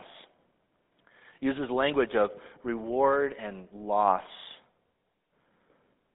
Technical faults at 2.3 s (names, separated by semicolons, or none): GSM full-rate codec